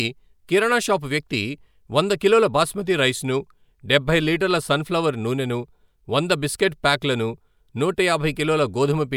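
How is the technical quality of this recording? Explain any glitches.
No glitches can be heard anywhere in this speech recording, so there is nothing to explain.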